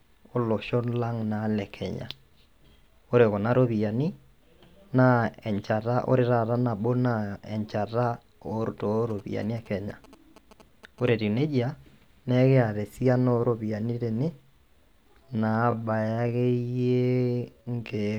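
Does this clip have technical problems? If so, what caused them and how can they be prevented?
Yes. From 9.10 to 11.09 s there are GSM signalling bursts: a galloping dit-dit-dit of short buzzes at about 217 Hz, sitting roughly 25 dB below the speech. A nearby 2G phone exchanging signalling bursts induces radio energy that the audio circuit rectifies into sound. Unlike mains hum, the buzz comes in irregular clusters rather than as a steady tone. Keeping phones away from microphones, cables and interfaces, or switching them to airplane mode, prevents it.

From 15.19 s to the end, the speech runs at about 0.61 times its original pace with the pitch unchanged, so it drags. This time-stretched section is likely caused by software slowing the audio to fit a length by repeating short pieces. A slowed tape or wrong sample rate would lower the pitch along with the pace, but here only the pace changes, and it does so abruptly. 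Fitting timing by editing, or re-recording instead of stretching, prevents it.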